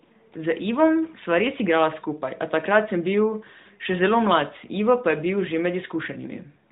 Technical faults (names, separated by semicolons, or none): none